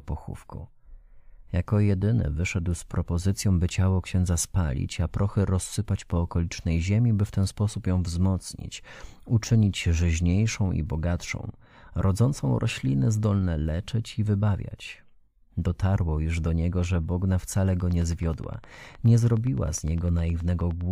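From 17.80 to 20.82 s a train of clicks runs under the speech: about thirty near-identical pulses at a steady 9.6 per second, roughly as loud as the voice, likely from electrical interference or a faulty connection. Unlike random crackle, the clicks keep one shape and an even pace, audible in pauses too.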